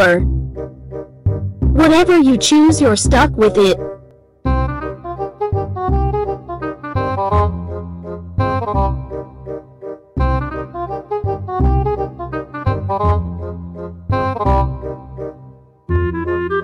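Hard clipping runs through the whole clip: the signal is driven about 13 dB past what a stage can pass, so around three percent of samples have their peaks sliced flat. The result is harsh fuzz on loud moments, unlike the rounder, gentler thickening of soft saturation.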